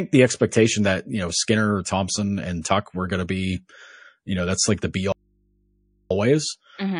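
Throughout the speech, a watery, swirling quality and metallic edges on s sounds point to plainly audible MP3 compression, likely at a low rate near 40 kbps. A spectrogram shows treble cut off at a fixed ceiling and weak high-frequency detail flickering on and off between frames.

At 2.62 s, a pre-echo of about 32 ms puts a short hiss ahead of a sharp attack. The encoder kept a long block of about 52 ms instead of switching to short ones, so its quantisation noise, about 17 dB louder, filled the quiet before the onset. On a spectrogram this appears as a faint vertical smear just before the transient.

From 5.12 s to 6.11 s, an audio dropout to a faint residue removes the speech for about 0.98 s, leaving only mains hum roughly 45 dB below the speech level. This is likely a lost signal feeding a path that stayed live. The waveform collapses abruptly to a thin band, and the spectrogram keeps only low horizontal hum lines.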